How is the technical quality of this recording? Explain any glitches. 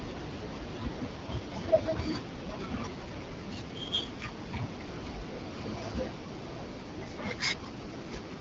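The speech carries two AMR rate drops, where the voice turns rougher and more synthetic while the band stays intact and nothing drops out. The AMR-WB (HD Voice) coding itself leaves only light damage.

From 1.12 to 4.70 s and again from 6.79 s to the end, the voice grows raspier and more artificial with no gap. This is the AMR rate drop: the network, likely reacting to a weak radio link, lowered the codec's rate and spent the bits on error protection. The sound fits a fall from 12.65 to 8.85 kbit/s.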